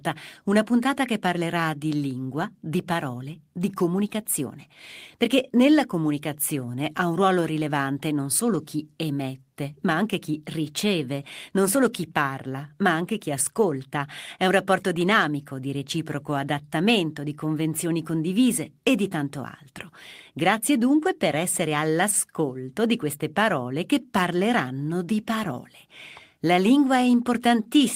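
Nothing stood out on listening; no technical problem could be heard anywhere in the recording.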